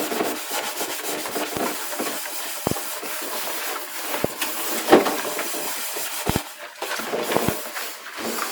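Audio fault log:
1.57–1.59 s, 2.67–2.74 s, 4.24–4.27 s, 6.29–6.38 s and 7.37–7.51 s: loud pop. Sharp pops jump out at five points at about 20 dB above the sound, and the last one is a bit hotter at about 25 dB. The second, fourth and fifth are quick doubles. Each is likely a sudden voltage step from a switch, static discharge or driver glitch, which the downstream circuitry shapes into a brief thump while the sound keeps going underneath.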